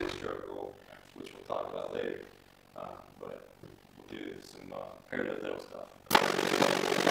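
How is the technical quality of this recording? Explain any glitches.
The technical quality is poor because of one fault that runs through the whole recording.

From start to finish there is overlap-add ripple. The audio was split into windowed frames and rejoined with an overlap whose windows do not add up to a steady gain, so the level dips once per frame, around 50 times a second, by about 60 dB at its deepest. That fast, regular rise and fall gives the sound a rough, buzzing flutter. Unlike mains hum, it adds no separate tone of its own. The sound itself is chopped.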